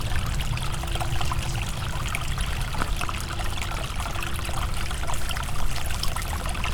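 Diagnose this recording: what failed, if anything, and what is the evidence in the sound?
At 3.62 s there is a single skip where the sound jumps forward with no silence between the two sides. That points to audio missing between chunks, most likely at the driver or buffer stage, where a recorder working in 2.0 s blocks dropped about 20 ms while closing one block and opening the next. On the waveform it shows as an abrupt splice with mismatched amplitude; on a spectrogram, as a sharp vertical seam where the texture suddenly shifts.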